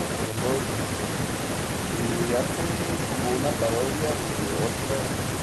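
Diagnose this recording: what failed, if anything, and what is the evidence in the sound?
Nothing failed in this recording of speech. No stage of the chain, from wiring through to playback, leaves any audible evidence of a problem.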